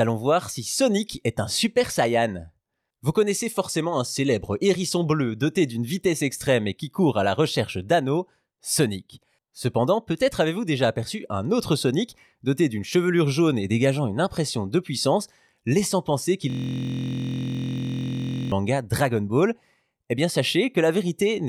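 Speech, with a system hang loop from 16.50 to 18.52 s: the system froze while playback kept cycling one 23.22 ms buffer, which fits a 1024-sample ring buffer, turning the sound into a steady buzz at 43.1 Hz.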